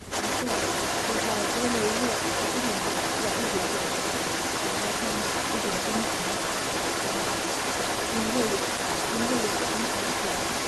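From the very start, 0.0 to 0.11 s, the speech dips by roughly 5 dB over about a tenth of a second, a brief, shallow pull-down of level rather than a full cut. This is speech suppressed in double talk, likely the result of an echo canceller that met sound from both ends at once, could not tell the near talker apart from loudspeaker echo, and attenuated everything together. It sounds like the opening of the clip ducking slightly before the level settles.

Echo leak runs through the whole clip, starting at 0.0 s: a second copy of the speech trails the original by 225 ms and sits loud, roughly 5 dB above the direct speech. This is likely one side playing the call over a loudspeaker whose echo canceller failed to remove what its microphone picked up, so that sound was sent back. It is heard as a delayed repeat of the voice.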